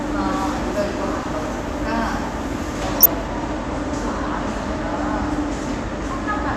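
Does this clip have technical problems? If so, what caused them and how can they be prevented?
Yes. DAB burbling: weak reception let bit errors past error correction, corrupting sub-band samples, so brief bursts of sub-band noise blips occur at 1.17–1.26 s and 2.97–3.06 s. Prevent it with a stronger signal, better antenna placement, or a higher-protection multiplex.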